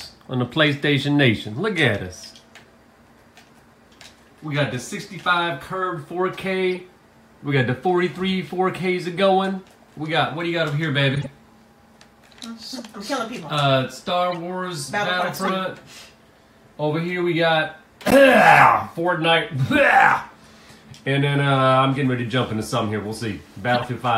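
The audio carries eight short bursts of corrupt frame decoded. Damaged compressed frames were played as if intact, so misread gains and codes put energy at the wrong frequencies. Each burst is heard as a chirp, squeak, blip or burst of noise. They fall at 1.51 s, 6.69–6.81 s, 11.15–11.26 s, 12.76–12.80 s, 14.32–14.37 s, 15.36–15.50 s, 18.08–18.13 s and 23.74–23.84 s. Each spans a few frames. The first is faint, near −35 dBFS. Later ones reach about −10 to −5 dBFS.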